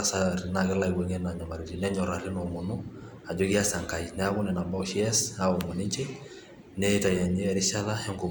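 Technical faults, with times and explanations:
No technical faults can be heard in this speech recording. Nothing in the sound calls for a time or an explanation.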